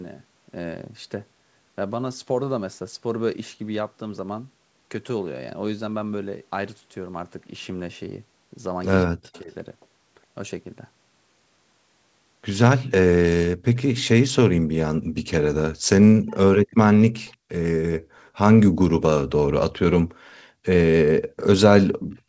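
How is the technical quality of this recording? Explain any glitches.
The recording has two kinds of call fault: speech suppressed in double talk and echo leak. The sound stops at 8 kHz, which fits a wideband call codec such as G.722 and the call's microphone processing.

Speech suppressed in double talk occurs from 9.05 to 9.48 s and from 16.12 to 16.37 s. The speech dips sharply, by about 40 dB at its deepest. Each time, about a third of a second of sound is lost or thinned. The likely cause is both sides talking at once. The echo canceller could not tell its own talker from the returning echo, so it turned everything down.

Echo leak appears at 9.33 to 9.4 s, 17.27 to 17.36 s and 21.99 to 22.19 s. A copy of the speech returns 179 ms late. The first two scraps are very quiet, about 30 and 35 dB below the speech. The last is much clearer, about 15 dB down. This is likely a loudspeaker on one side of the call. 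Its echo canceller let some of the played-back sound slip through.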